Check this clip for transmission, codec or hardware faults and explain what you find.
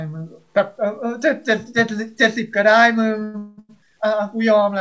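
Two faults stand out in this speech, which has passed through a call path whose G.722 coding leaves nothing above 8 kHz.

Low bit depth without dither runs through the whole clip. Quiet passages sound grainy and gritty, with distortion that tracks the speech. This is likely undithered truncation to about 10 bits, leaving error roughly 45 dB below the signal.

Repeated stalls (stutter) occur from 3.20 to 3.71 s. The audio drags and catches four times, the longest hold lasting 198 ms. The jitter buffer kept running empty and the receiver stretched the last sound to fill each wait. Nothing is lost, but about three quarters of that span is filled in.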